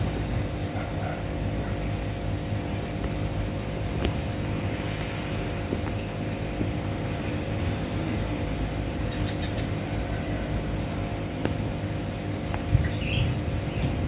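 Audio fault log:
Nothing stood out on listening.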